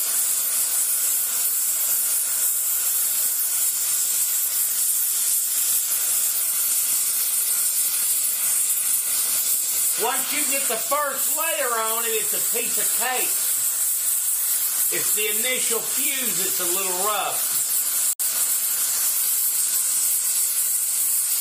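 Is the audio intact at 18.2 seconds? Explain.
No. From 18.13 to 18.23 s there is a short, loud glitch (a chirp, squeak, blip or burst of noise), peaking around -5 dBFS. This is a corrupt frame decoded: a few damaged compressed frames were played anyway, so misread gains and codes put energy at the wrong frequencies.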